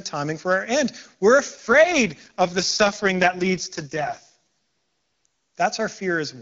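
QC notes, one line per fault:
1.55–5.26 s, AMR rate drop: speech turns rough and synthetic with band and continuity intact, which fits a fall from roughly 23.85 to 6.6 kbit/s on AMR-WB.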